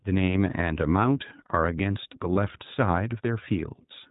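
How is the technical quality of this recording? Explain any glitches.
Quality is held back by plainly audible codec coloration across the whole clip, plus one short dropout near the middle.

Throughout, this is plainly the iLBC codec at work. It's a narrowband VoIP codec, so nothing above 4 kHz survives, which takes the air and crispness out of the speech. It codes each frame's excitation on its own, and the damage is clearly audible here: a rough, slightly synthetic edge on the speech. The character fits iLBC's 15.2 kbps mode with 20 ms frames.

At 2.34 to 2.37 s there's a lost iLBC frame, and the timing points to a single 20 ms frame going missing. The decoder covers the hole by repeating the last pitch cycle with some noise mixed in, so the gap comes out as a brief held, slightly buzzy vowel-like smear. Because each iLBC frame decodes independently, the speech snaps back to normal right after it.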